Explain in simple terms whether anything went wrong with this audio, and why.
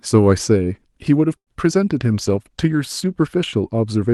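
A short stall from a late packet happens at 1.37 s and lasts until 1.49 s. During this call, one piece of the audio arrived late, and the receiver ran out of sound to play. To bridge the gap, it stretched the last bit of speech for about a tenth of a second until the late piece showed up, then carried on. Nothing is lost, but that moment sounds held too long, with a faint buzz or dip.

A call bitrate drop runs from 2.02 s to 3.41 s. The connection seemed to have less room, so the system squeezed the speech into much less data. It stays at its most squeezed for about 1.3 seconds. Packing the sound this tightly makes it coarser, so the voice turns rough, watery or muffled until the connection recovers near the end of that stretch.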